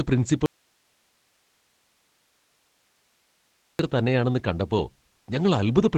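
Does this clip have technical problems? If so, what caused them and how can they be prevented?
Yes. Throughout the speech the sound is muffled and slightly hoarse, with a faint robotic edge and nothing above about 8 kHz. This is Opus voice compression working in its SILK linear-prediction mode at wideband. The coder predicts each short stretch of speech from the previous samples and spends very few bits on the leftover excitation, so breath and texture come out coarse. The damage is plainly audible and fits a low bitrate of around 12 kbps. To prevent it, give the encoder more bitrate, for example 24 kbps or more for voice.

From 0.46 s to 3.79 s the speech suddenly disappears for about 3.3 s and leaves only hiss, about 45 dB below the speech level. It cuts back in abruptly just before "തന്നെയാണെന്ന് കണ്ടപ്പോ". This is an audio dropout to a faint residue. The likely cause is that the speech signal was lost upstream while the rest of the recording or transmission path stayed live and kept passing its own noise floor. 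To prevent it, secure the source connection and monitor the input level during capture so a break is caught at once.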